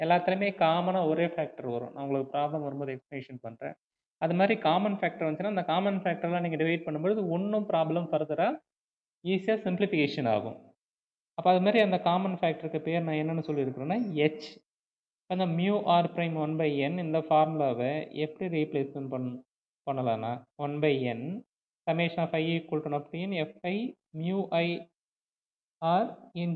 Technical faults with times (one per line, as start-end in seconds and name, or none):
none